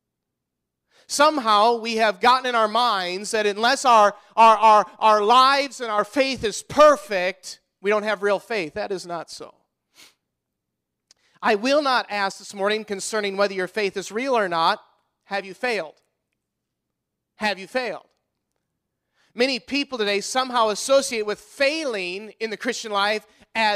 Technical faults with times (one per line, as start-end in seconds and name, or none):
5.67-5.98 one channel drops out
12.32-12.49 one channel drops out